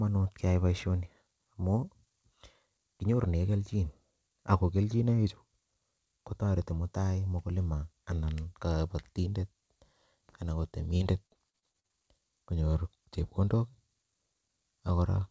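From 10.97 to 11.93 s there's repeated packet loss, giving that robotic sound: eight short dropouts, the longest about 39 ms, each papered over by stretching the last bit of audio. About a quarter of that stretch is patched-in filler, so the speech turns choppy. The band stops at 8 kHz, which fits a G.722 call at 64 kbps.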